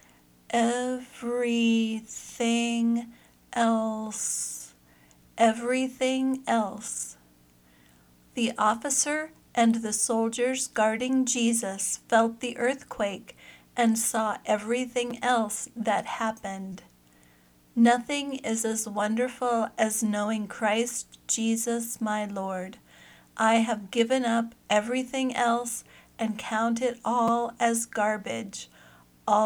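At 15.11 s there is a repeated buffer. New audio arrived late, so the device played its last block again. Each block lasts about 5.8 ms, which fits a 256-sample buffer. It sounds twice more, with a hard join at each repeat. The result is a brief buzz. From 16.72 to 16.75 s the fault returns with four extra plays, so the buzz runs longer. At 27.28 s it happens once more, with two extra plays.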